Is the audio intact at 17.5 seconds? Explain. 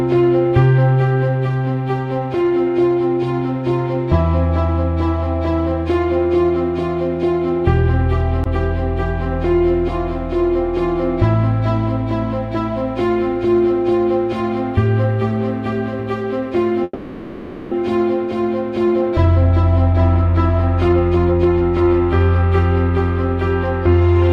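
No, 17.5 s falls inside a call audio freeze from 16.83 to 17.73 s: the last sound smears into a fading buzz, likely from delayed packets, then resumes unmissed.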